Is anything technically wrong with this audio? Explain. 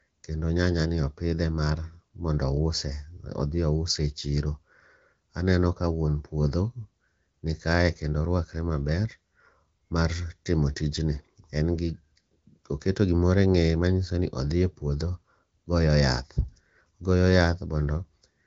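No, nothing is technically wrong: the speech carries the band limit of an AMR wideband (HD Voice) codec, with nothing above about 7.6 kHz and only the light coding texture that fits an upper rate near 15.85 kbit/s, where the codec is expected to keep speech clear.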